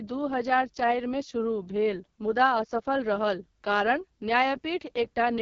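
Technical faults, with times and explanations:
Throughout: AMR wideband (HD Voice) codec. Rough, raspy speech with nothing above 7.1 kHz, as a sparse pulse-driven vocal model strains at what sounds like the lowest 6.6 kbit/s mode.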